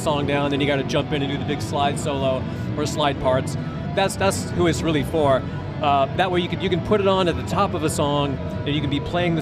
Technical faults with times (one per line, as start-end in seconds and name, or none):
none